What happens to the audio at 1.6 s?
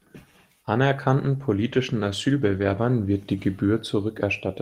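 At 1.6 s the speech is inside a call bitrate drop that runs from 1.2 s to about 3.71 s. The connection's bandwidth estimate fell, so the encoder was forced to spend far fewer bits on each moment of speech. The sound at this point is rougher and more watery, with the top end dulled and muffled. The degradation suggests the rate was roughly halved, for example from 32 to 16 kbps. The worst stretch lasts about 1.7 s before quality recovers.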